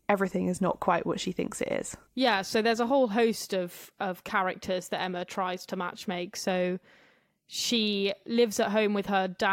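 Listening to the speech recording, nothing technical stood out as wrong at any point.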